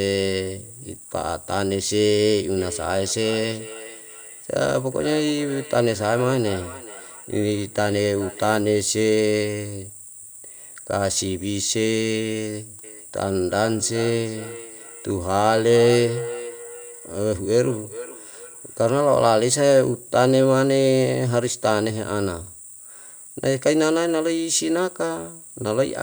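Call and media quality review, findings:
Feedback echo between two devices, 2.58–8.65 s (peak about −17 dB re speech) and 12.84–19.39 s (about −13 dB). Speech returns at roughly 0.4 s intervals, thinner and ringing. Second device in the room replaying far-end audio into a nearby mic; local echo canceller can't remove it.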